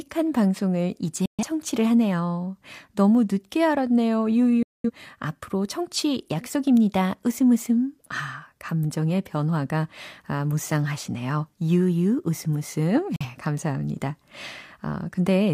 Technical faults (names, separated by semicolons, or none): digital broadcast dropout